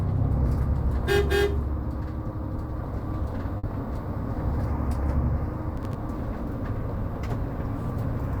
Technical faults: burst of packet loss; processor overload crackle

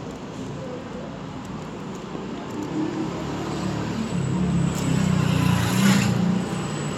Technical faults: none

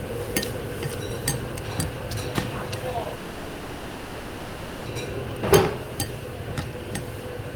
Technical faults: short concealed packet loss; long network dropout

